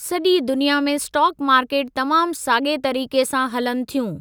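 No technical faults can be heard anywhere in this speech recording.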